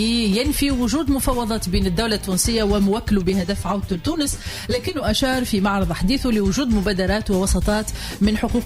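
From 3.30 to 5.03 s the audio turns hollow from channel delay comb filtering: a delay of about 10 ms cancels at mono summing, leaving evenly spaced spectrogram notches from roughly 50 Hz.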